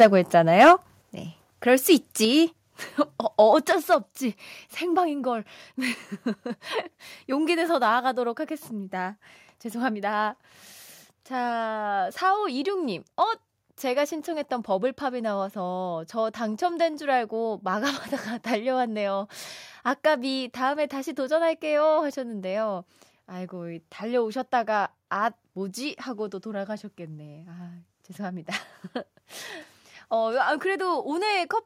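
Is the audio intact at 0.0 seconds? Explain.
No. From 0.01 to 0.06 s there is clipping, likely microphone overload, with peaks driven about 6 dB past full scale; roughly 15 percent of samples show flattened waveform tops and broadband crackle smearing the spectrogram. At 0.03 s, the level drops about 2 dB in one step, likely the microphone volume being stepped down, and the waveform envelope abruptly shrinks.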